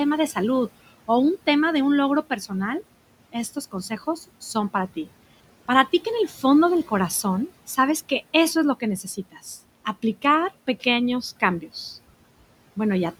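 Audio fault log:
Throughout: noise suppressor artifacts. The suppressor is pulling the room noise down by about 18 dB, frame by frame, band by band. So the background sinks away in the gaps and comes back up under the speech. The room noise sits about 19 dB below the speech.
6.28–6.44 s and 9.03–9.46 s: speech cut by the noise suppressor. In both places the suppressor decided part of the speech was background and turned it down along with the noise. The first dip goes down about 9 dB and the second goes deeper, about 15 dB. Each one takes out something like 150 ms of speech. The result is soft sounds that come across swallowed or faded, as if the talker drifted off-mic for a moment.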